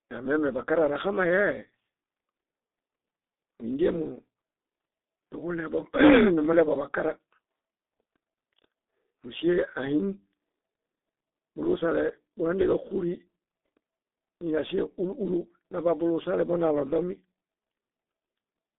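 Speech, with G.723.1 codec damage throughout. Nothing sounds above about 3.8 kHz, and the band runs roughly 200 Hz to 3.7 kHz. The voice is muffled and hoarse. Consonants smear. The slow model updates and heavy coding fit a 6.3 kbit/s bitrate.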